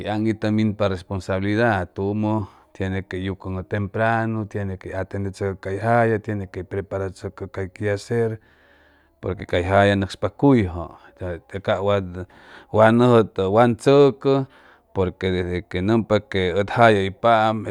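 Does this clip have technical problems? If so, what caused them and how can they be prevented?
No, there are no technical problems in this clip.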